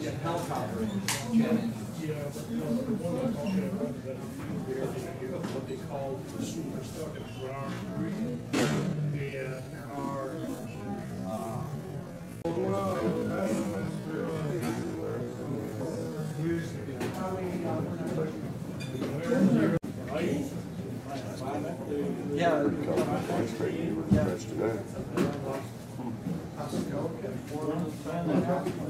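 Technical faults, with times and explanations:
7.49–16.65 s, time-stretched section: likely software stretching to fill time, running at about 0.52× speed with pitch held, so the pace abruptly slows and drags.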